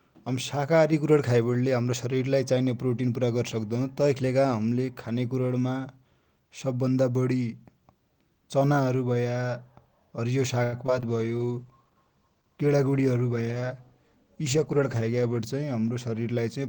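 At 10.63 s a short stall from a late packet holds the sound for about 91 ms, from 10.63 to 10.75 s, until the delayed packet arrives. Unlike a loss, nothing is skipped; playback resumes where it stopped, merely 91 ms later, heard as a stretched, faintly buzzy hold.

Two short concealed packet losses follow, at 10.87 to 10.90 s and 11.00 to 11.04 s. Each time 20 ms never arrived and was covered by extrapolating the preceding sound before blending back. The result is a quick smear or wobble where a sliver of material is actually gone, not delayed.

From 11.08 to 15.46 s a call bitrate drop halves the encoding rate from 32 to 16 kbps for about 4.4 s. The coarser coding makes the sound rough and watery. This is a sustained change in texture rather than a momentary glitch, and it ends when the rate recovers.

Inside that stretch, from 14.24 to 14.80 s, a jitter buffer speed-up trims the backlog by cutting short pitch-period slices, roughly 40 ms in total. 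Playback runs about 6% fast at unchanged pitch and sounds slightly hurried.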